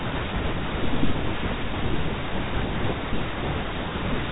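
Nothing in this speech recording stands out as a technical fault. It comes over G.711 A-law telephone coding, so nothing above 4 kHz is present, and at most a faint coding hiss that rises and falls with the signal level sits underneath.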